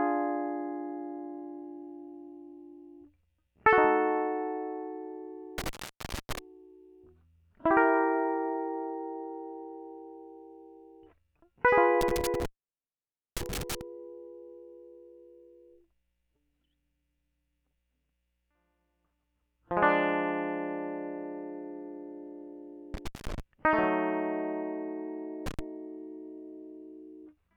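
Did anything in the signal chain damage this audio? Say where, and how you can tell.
Yes. An intermittent contact in the analogue wiring cuts the music out at 5.58, 12.01, 22.94 and 25.46 s for 0.1 to 0.9 s, with crackle where the loose connection opens and recloses.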